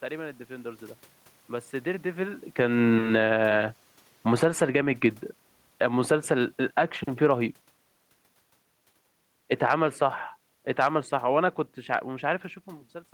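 From 2.45 s to 4.71 s the speech sinks steadily by about 10 dB, and the room noise behind it sinks by the same amount. That shared drop marks it as automatic gain falling: the gain control judged the input too loud, probably reacting to the talker moving at around 2 s, and pulled its gain down gradually. The same falling gain returns twice, milder than the first, with a slow slide of about 3 dB between 5.66 s and 7.82 s and a quicker dip of about 3 dB from 9.46 s to 9.82 s.

Between 4.62 s and 5.22 s, speech and background swell together by about 6 dB over roughly half a second. This is automatic gain rising. The control has decided the level was too quiet and pushed its gain back up. The rise slightly overlaps the end of the first fall, which leaves a dip followed by a recovery. A later level change near 12.5 s is the talker moving, not the gain control.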